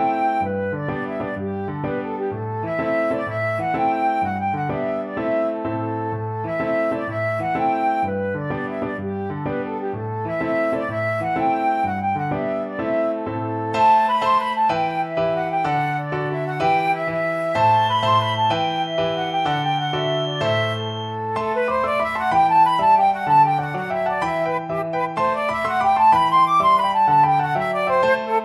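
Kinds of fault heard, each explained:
Feedback whistle: a thin, steady tone near 3.2 kHz sits roughly 15 dB beneath the sound from 17.68 to 21.21 s, swelling and fading slowly in level. The likely cause is a loudspeaker-to-microphone loop held at the edge of feedback, sustaining one frequency without running away.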